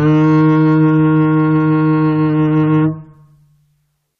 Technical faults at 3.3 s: none

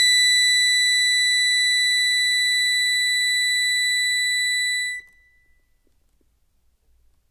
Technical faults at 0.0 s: aliasing

